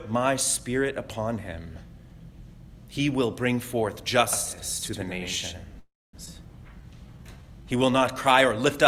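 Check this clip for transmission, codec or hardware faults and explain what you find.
There are four faults here, all bunched from about 4.3 s onward.

From 4.33 to 6.44 s there's a doubled audio track. A second full-band copy trails by roughly a tenth of a second at about 5 dB down, with no room colour and hard edges. Most likely the sound got picked up twice through a slower second path.

At 5.79 s a call audio freeze hits, lasting until 6.16 s. Packets were probably held up and the jitter buffer ran dry. You hear the last sound stretched into a fading buzz or hiss, then about 230 ms of silence, before the audio resumes where it stopped, with nothing lost.

At 6.25 to 6.29 s there's a skip ahead. Roughly a fifth of a second of audio was dropped while later material was already queued, so playback jumps forward with barely any gap and the two sides butt together almost directly.

From 6.65 to 8.62 s a jitter buffer slow-down kicks in. 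The receiver repeats tiny pitch-period chunks to rebuild its reserve, adding 176 ms, so the audio plays at about 91% speed at unchanged pitch and sounds drawn out.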